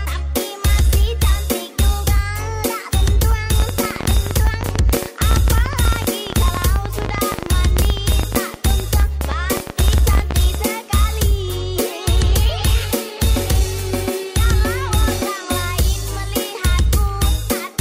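From 3.60 to 10.56 s, a train of clicks ticks irregularly at 14.5 per second, about 10 dB over the sound, likely from interference, a faulty connection or power supply.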